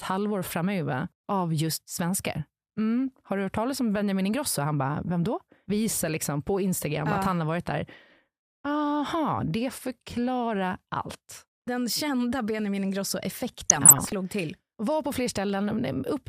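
From 2.98 to 3.17 s a few watery blips, and again more heavily from 13.60 to 14.14 s bubbling, squelchy chirps, cut across the speech. This is DAB burbling: weak reception let bit errors slip past error correction, corrupting MP2 sub-band levels frame by frame, worse in the second stretch.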